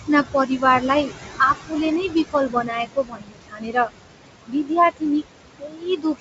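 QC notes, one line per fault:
throughout: noise suppressor artifacts. The room noise, which sits only about 10 dB under the speech, dips between phrases and swells back beneath them. The suppressor is pulling down the bands it judges to be steady noise by about 20 dB, frame by frame.
0.33–0.63 s, 1.39–1.73 s, 2.08–3.90 s, 4.47–4.71 s, 5.59 s to the end: speech cut by the noise suppressor. In these stretches parts of the speech turn faint or swallowed, with endings and soft consonants sinking into the background. The suppressor mistook those low-level parts for noise and turned them down with it, by about 14, 17, 21, 19 and 18 dB at the deepest in each stretch. The worst is 2.08–3.90 s, where roughly a full second is affected; in the final stretch about half a second is affected.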